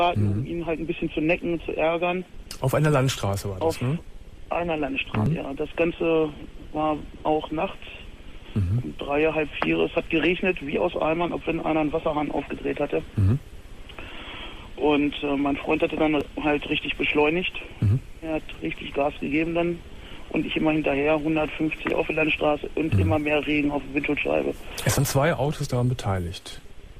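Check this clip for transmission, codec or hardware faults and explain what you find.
Four short bursts of damaged data in a compressed stream, at 5.26, 16.21, 21.90 and 24.98 s. At each point part of the encoded stream is wrong, so the decoder misreads or rejects the frame there, loses its place in the bitstream and has to hunt for the next valid frame header before playback resumes. Each event lasts only a few milliseconds and comes through as a brief chirp or blip cutting into the audio.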